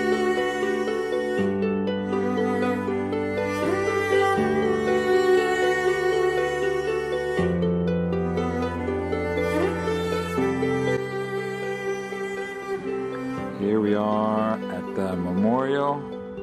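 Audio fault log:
13.92–14.54 s and 15.45–15.89 s, hard clipping: the signal arrives at a stage hotter than it can pass, by about 1 dB in the first stretch and about 2 dB in the second, so the tops of the loudest peaks are sheared off flat. Those squared edges throw new harmonics high into the spectrum, heard as a brittle crackle on the peaks. The second stretch, with more overload, has the rougher, edgier crackle.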